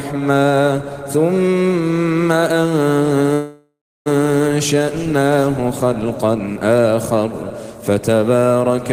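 At 3.33 s the audio hits a call audio freeze: the last sound smears into a fading buzz, goes silent, then resumes at 4.08 s, likely from stalled packets.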